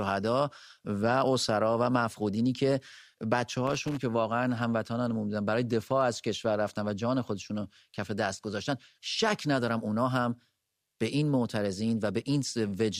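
A speech recording with one problem: a burst of loose connector crackle from about 3.67 to 3.98 s, roughly a third of a second of irregular scratchy popping. That's the sound of a worn or dirty contact somewhere in the chain briefly making and breaking as it shifts. The signal gets chopped in and out, and any DC sitting on the line turns each break into a little pop, which gives that gritty texture.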